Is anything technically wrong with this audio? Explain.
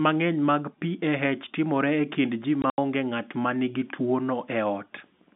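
Yes, there's packet loss filled with silence between 2.62 and 2.78 s. About 100 ms of the phone-band speech drops out in hard-edged gaps, the longest 80 ms, which fits lost 20 ms packets replaced by silence.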